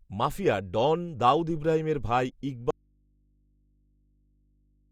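Right after "ডন দাউদ ইব্রাহিমের ভাই", at about 2.71 s, the speech drops out abruptly and never comes back, so this audio dropout to a faint residue runs all the way to the end. What's left in the gap is just a low mains hum, something like 40 dB under the speech level. The likely cause is the signal feed breaking while the input stayed live, so the open input kept passing hum.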